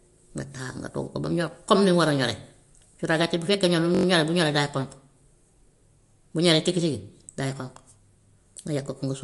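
From start to finish the speech carries plainly audible damage of the kind MP3 compression leaves, likely from encoding at a low bitrate in the region of 52 kbps. Nothing is present above 11.2 kHz, so the treble stops at a hard ceiling. Weak frequency components drop in and out between frames, giving the voice a watery, swirling texture, with metallic chirps on sibilants and smeared consonant onsets.

From 3.95 s to 4.05 s a system hang loop interrupts the speech. The playback hardware kept cycling through the same buffer while the system stalled. A single 21.3 ms fragment repeats exactly five times, which fits a 1024-sample buffer. At a loop rate of 46.9 Hz the repeats fuse into a brief, rough buzz. Essentially no audio is lost, and the speech resumes directly after the stall.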